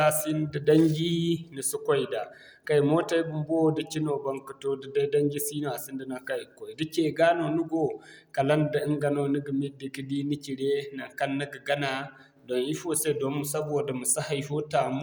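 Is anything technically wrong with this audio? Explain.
No, the recording shows no technical faults, and the signal carries the speech without any audible defect from the recording or playback chain.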